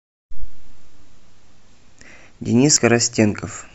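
Speech clip with damaged data in a compressed stream. Corrupt bytes make the decoder misread frames and lose sync, heard as brief blips at 0.42 s and 2.77 to 2.79 s.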